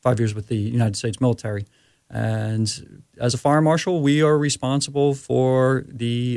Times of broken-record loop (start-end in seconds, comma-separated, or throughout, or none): none